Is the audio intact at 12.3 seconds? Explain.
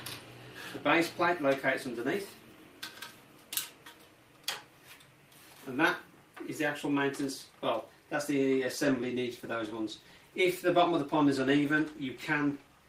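No, at 12.3 s you're inside a call bitrate drop that starts at 8.87 s and runs to the end. The bandwidth estimate sank, so the encoder went from 40 to 18 kbps. It codes far more coarsely there and trims the highs, so it sounds rough and muffled.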